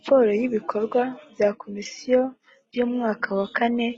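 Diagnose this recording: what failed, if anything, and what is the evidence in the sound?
At 0.99 s the speech abruptly loses its top end and takes on a thin, synthetic sheen in the upper frequencies, with swirly codec artefacts more audible, and it stays that way to the end without any gap or dropout. This is an adaptive stream at a lower bitrate. The network slowed, so the player switched mid-stream to a leaner encoding. The character fits a change from AAC-LC at 96 kbit/s to HE-AAC at 16 kbit/s, where spectral band replication resynthesises the treble.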